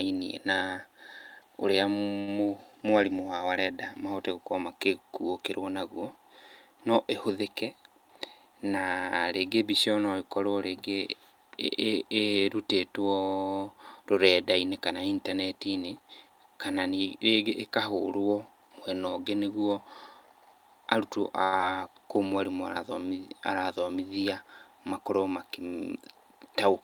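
Speech recording with two short stalls from a late packet, one jitter buffer speed-up and one short concealed packet loss. At 2.19 to 2.29 s a packet arrived late, the jitter buffer ran dry, and the receiver held the last sound for about 80 ms before resuming where it left off. Nothing is lost, but the sound is drawn out with a slight buzz or dip, and the playout delay grows by 80 ms. From 15.93 to 16.37 s the jitter buffer speed-up trims a backlog by cutting pitch-period-sized slices out of the signal in quick succession, roughly 50 ms in total. The speech plays at about 111% of normal rate with unchanged pitch, so that stretch sounds rushed. A second stall from a late packet follows at 21.44 to 21.54 s, just before "kũu mwarimũ". Again the last sound is stretched, this time for 84 ms, with no audio dropped, adding 84 ms of delay. Immediately after, at 21.58 to 21.61 s and still just ahead of "kũu mwarimũ", comes a short concealed packet loss. 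About 40 ms of audio never reached the decoder and only about 10 ms was synthesised from the preceding sound before blending back, so the net delay shrinks by roughly 30 ms. It comes across as a brief smear or wobble, and a short sound there can drop out.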